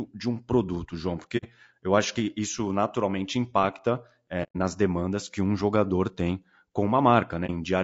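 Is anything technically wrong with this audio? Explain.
Yes, two kinds of trouble. Throughout this speech, there's plainly audible low-delay AAC compression: voices sound rough and grainy, with noise between harmonics and a dull top. That's likely AAC-ELD, whose short frames resolve pitch poorly, and the damage fits roughly 32 kbps.

There's also AAC frame loss with muting: soft-edged holes at 1.37–1.45 s, just before "eu acho que isso", and 4.43–4.56 s, between "que isso naturalmente impacta" and "demandas que um jogador"; and a brief dip at 7.46–7.50 s. The decoder zeroed lost frames, so the sound fades out and back in.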